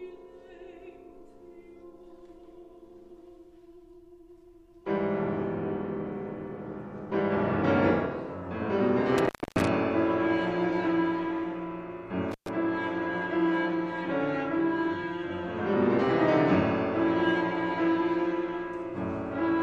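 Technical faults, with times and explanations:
9.18 to 9.67 s and 12.32 to 12.49 s, intermittent contact: a loose plug or cable connection briefly loses contact twice, breaking the signal path for about 273 ms in the first event and about 121 ms in the second. While the path is open, the audio drops out and a faint hiss remains. The contact scraping as it breaks and remakes produces a crackle at each edge of both gaps.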